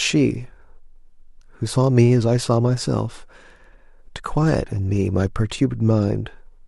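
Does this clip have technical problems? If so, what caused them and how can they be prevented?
No, there's nothing technically wrong to hear in this speech clip, so there's nothing to trace back or guard against.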